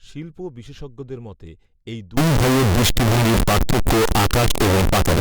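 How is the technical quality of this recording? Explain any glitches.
The recording has one serious glitch. From 2.17 s to the end, after "শিল্প বিশেষজ্ঞদের মতে এই", integer read as float occurs. 32-bit integer samples are interpreted as 32-bit floats. Values snap between zero and full-scale clipping. The result is a harsh, very loud square-wave buzz that drops out in quiet moments.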